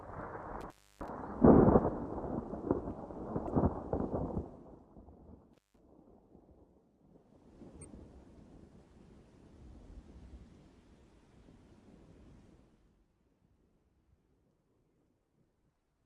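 At 0.61 s an intermittent contact opens the line for about 305 ms, until 1.09 s. The sound drops out with crackle at the break and the reconnect, leaving faint hiss in the gap. A second contact break from 5.53 to 5.79 s cuts out for about 161 ms with the same crackling edges.

From 3.46 to 3.50 s a corrupt frame is decoded. The misread data throws energy to the wrong frequencies, which is heard as a short chirp, blip or burst of noise peaking around -30 dBFS. About 20 ms of audio is skipped, which points to a couple of damaged frames. A second one from 7.78 to 7.85 s is quieter, around -40 dBFS, and its length suggests about three frames.

Between 4.35 and 4.97 s the level falls by roughly 15 dB in 1 dB steps with no smoothing, at about 50 steps per second. Each step clicks, and together they make zipper noise, a fast ticking over the sound as it fades.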